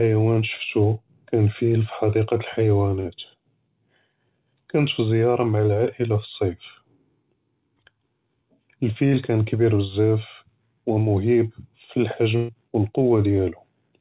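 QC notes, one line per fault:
3.00–3.08 s and 12.36–12.52 s, burst of packet loss: consecutive packets went missing or arrived too late, so the receiver filled the gaps by extending the preceding sound and fading it. That fill lasts about 48 ms the first time and 125 ms the second. When playback resumes, roughly 40 ms and 120 ms of audio have been skipped. The concealment carries the same 4 kHz band limit as the rest of the G.711 call audio.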